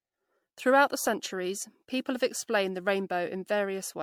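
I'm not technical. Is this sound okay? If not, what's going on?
No. Generation loss throughout: the speech sounds swirly and hollow, likely from being re-saved as MP3 about ten times, each save adding fresh damage.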